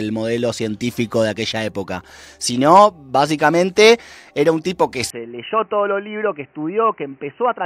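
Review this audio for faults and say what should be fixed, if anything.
From 5.10 s to the end, the speech goes dull and boxy, cut off above 3 kHz, roughly 10 dB quieter and over a new noise floor, with no gap at the change. This is likely the input switched to a poorer device, another microphone or a headset's call profile with a narrower band.

To prevent it, lock recording to one input device and turn off automatic switching to headset call profiles.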